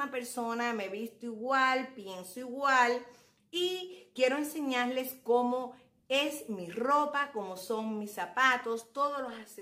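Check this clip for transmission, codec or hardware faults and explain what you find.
No transmission, codec or hardware faults.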